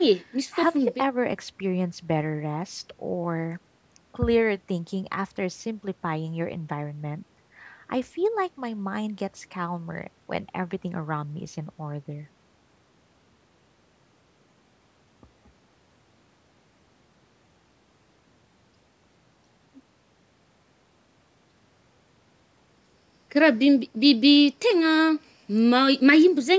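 No faults in this speech.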